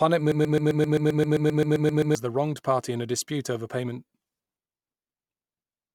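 From 0.32 to 2.15 s, a broken-record loop, likely from a stall, repeats one 131 ms fragment 14 times as identical waveform blocks before "the wronged party in".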